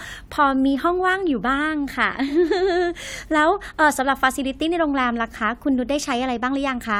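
Nothing here stands out as a technical fault; the speech runs along without any glitches worth flagging.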